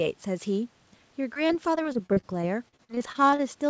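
Repeated packet loss (robotic sound) runs from 1.34 to 3.41 s. Over this stretch, packets keep arriving late or not at all, leaving more than a dozen short holes, the longest 41 ms. The receiver fills each hole by stretching the last sound it had, so about 19% of the span is patched-in sound. Across the speech this gives a choppy, robotic texture with fragments missing, all within the band that already stops at 8 kHz.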